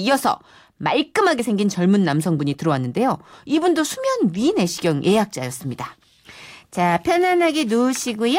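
At 1.39 s the speech jumps forward abruptly, with roughly 20 ms missing and the two sides butted together without a gap. This is audio missing between chunks, likely from a recorder or processor working in 2.5 s blocks and dropping material at the handover.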